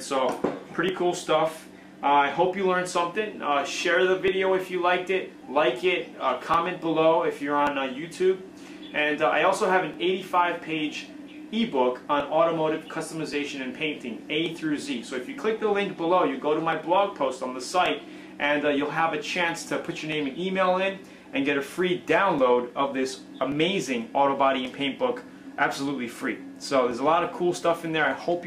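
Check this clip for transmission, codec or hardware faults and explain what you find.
One fault stands out: clock drift buffer slips from 0.89 s to 28.05 s. A brief click recurs every 1.13 s, likely from clocks about 700 ppm apart slipping roughly 30 samples. Its strict regularity separates it from random packet-loss dropouts.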